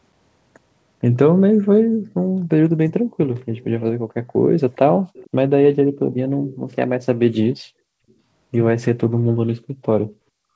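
At 4.22 to 4.41 s, and again at 5.0 to 5.1 s, the room background is gated by the echo canceller. While the far end's loudspeaker audio was active, the canceller clamped the microphone, pulling the background down by as much as about 40 dB. It shows up as brief holes in the ambience, the first around 150 ms and the second shorter. Unlike a network dropout, the hole follows the far-end playback and the sound returns when the canceller lets go.

Right after, at 5.13 to 5.3 s, there is an echo leak. A faint copy of the sound arrives 453 ms late, roughly 25 dB below the direct speech. A second, fainter scrap, about 40 dB down, comes at 8.09 to 8.13 s with the same delay. The cause is likely an echo canceller that did not fully remove the loudspeaker signal, so the residue was sent back. The fixed, long delay and the isolated fragments set it apart from room reverberation, which would trail every sound continuously.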